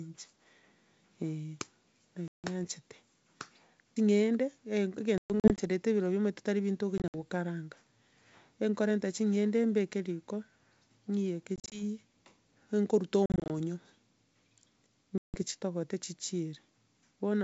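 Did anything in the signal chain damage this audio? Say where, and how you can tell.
Yes. Packet loss on an ADPCM call damaged the audio at the network stage, with hard-edged silent holes of 100 to 200 ms at 2.28, 5.18, 6.98, 11.56, 13.26 and 15.18 s, some scattered in short runs. After each hole the speech returns slightly distorted while the G.722 decoder's predictor and step size recover.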